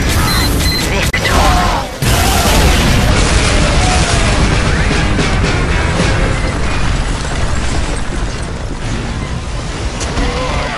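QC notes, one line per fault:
1.10–1.14 s, digital broadcast dropout: the sound fades out over about 8 ms, leaves a silent hole of roughly 24 ms, then resumes. The gap fits a single lost frame. The receiver stopped getting valid data, either from a signal loss or a failed checksum, and muted its output until clean frames arrived again. Whatever was sent during that instant is gone and is not recovered, so the audio jumps forward rather than pausing and continuing.
3.09 s to the end, section at the wrong speed: from this point on the audio runs at 0.818 times its proper rate, so everything is slower and about four semitones lower, with pitch and tempo shifting together. The change is abrupt rather than gradual and holds steady to the end of the clip. The likely cause is that this portion was played back or edited against the wrong clock, stretching its timing and dragging its pitch down with it.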